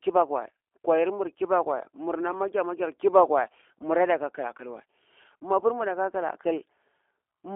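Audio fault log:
Throughout: G.729 codec. The speech is squeezed into a telephone band of about 300 Hz to 3.5 kHz, with nothing at all above 3.5 kHz. Voices sound thin and boxy. The codec does not send the waveform. It rebuilds each 10 ms frame from a vocal tract filter, a pitch predictor and a few pulses. That gives a plainly rough, synthetic buzz, which fits the low-complexity G.729A variant at 8 kbit/s.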